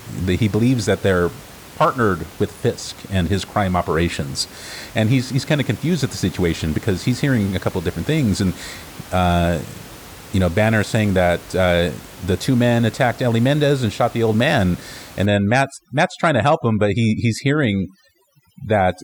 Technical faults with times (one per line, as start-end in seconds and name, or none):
15.26-19.03 overdone noise removal